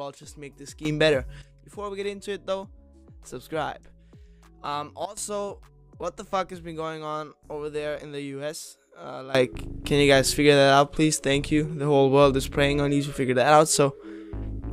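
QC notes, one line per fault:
0.85–1.42 s, sudden gain jump: sound and background noise step up together by about 12 dB, then drop back, likely a gain change applied without any ramp.
5.05–5.17 s, sudden gain jump: level and noise floor fall abruptly by about 17 dB for this brief stretch, likely a digital gain setting switched instantly.
9.35 s to the end, sudden gain jump: everything, noise included, leaps up by about 18 dB and stays there, likely an unramped gain or bit-shift change.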